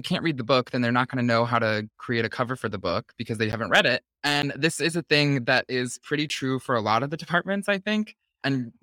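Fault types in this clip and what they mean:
Block of digital silence: at 3.52, 4.42 and 6.29 s the speech drops to silence for 10 ms each. With no fade in or out, each gap lands as a tick or dip rather than an audible hole.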